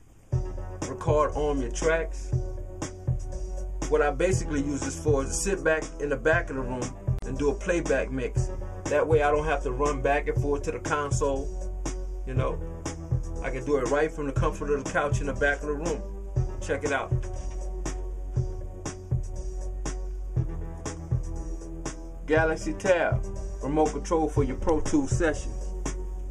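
At 7.19 s, two separately encoded pieces of the audio were joined without trimming the encoder's start-up delay or the padding on the last frame, leaving a gap at a join of encoded pieces. That untrimmed gap lasts 37.5 ms, running to 7.22 s. It cuts into the continuous sound as a brief dropout, its edges softened by the codec, and the sound then picks up exactly where it left off.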